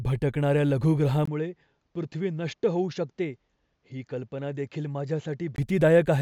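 At 1.25 s the speech drops out for about 20 ms, then returns a little quieter, roughly 5 dB down, and duller, with nothing above 7.6 kHz and a faint new noise floor far below the signal. The full, brighter sound only comes back at 5.58 s. This is most likely the input switched to a poorer device mid-recording, another microphone or a headset's call profile with a narrower band and its own level and noise.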